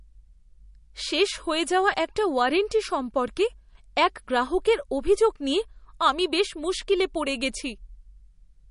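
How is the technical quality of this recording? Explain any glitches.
Quality is noticeably degraded by lossy coding throughout the speech. Likely MP3 compression, consistent with a low bitrate near 40 kbps: nothing remains above 10.6 kHz, and starved frequency lines flicker, giving watery, swirly sibilants and smeared consonant attacks.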